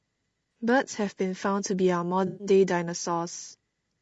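Low-delay AAC compression runs through the whole speech clip. The voice sounds rough and grainy, with noise filling the gaps between harmonics and a thin, synthetic top band. The likely cause is an AAC-ELD-style coder, whose short frames resolve pitch poorly, and the damage level fits a low rate near 32 kbps.

AAC frame loss with concealment occurs at 0.52 to 0.54 s and again at 2.27 to 2.47 s. In each gap the decoder rebuilt missing frames from the last good spectrum. The first gap is a brief smeared blip, while the second, about 120 ms long, is a phasey, noisy patch.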